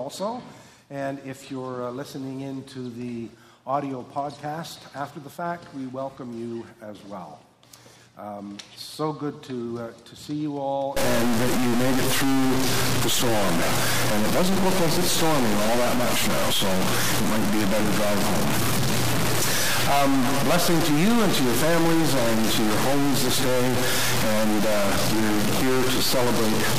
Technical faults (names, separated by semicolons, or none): stuck bit